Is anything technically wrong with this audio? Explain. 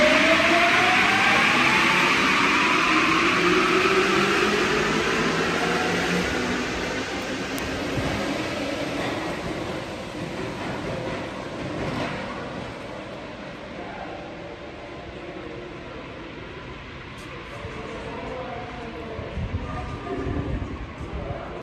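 Yes. Word clock ticks run through the audio from 0.63 s to 21.48 s, roughly every 1.5 s, about fifteen in all. The receiving device is clocked independently of the digital link feeding it, and the two clocks differ by something like 15 ppm. Each time they slip one sample apart, a few samples are misread, which fits a single sample being dropped or repeated. Unlike random crackle or dropouts, these ticks arrive at a steady, almost metronomic rate.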